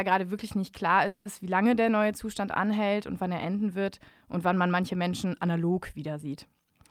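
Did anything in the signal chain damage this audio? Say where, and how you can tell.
Yes, at the network stage: a call audio freeze, most likely packets stalling in transit so the jitter buffer ran dry. From 1.07 to 1.27 s, just after "gerade wirklich nicht klar", the receiver stretched the last sound into a fading buzz or hiss lasting about 180 ms instead of going silent. The speech then resumes intact with "ist wie lange", nothing skipped, but everything after it runs about 180 ms later.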